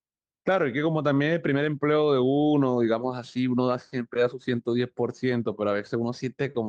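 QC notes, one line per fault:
No faults to note in this speech clip for the QC notes.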